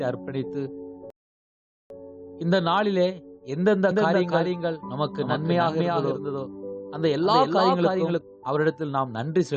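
A rebuffering stall hits at 1.10 s: the player runs dry of downloaded audio, the sound drops to silence, and it picks up again at 1.90 s from exactly the point where it broke off. The gap adds about 0.8 s to the running time without removing anything, so the clip simply pauses mid-flow and then carries on as if nothing had happened, with no skipped material on either side of the hole.

A doubled audio track runs from 3.91 s to 8.21 s, where a second full-band copy of the sound trails the original by roughly 0.3 s, sitting about 5 dB lower. It has no room tail or colouring of its own, which sets it apart from an echo, and it switches on and off abruptly at both ends. This most likely comes from the same signal being mixed in twice through a slower path.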